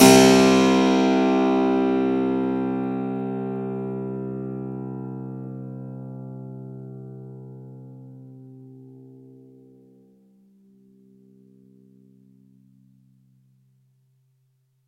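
Throughout the clip a steady ticking, fast enough to edge toward a buzz at 25 Hz, rides on the sound wherever signal is present. This is a resampler restarted on every block: each 40 ms block was converted separately, likely while going from 44.1 kHz to 48 kHz, leaving a small error at every block edge.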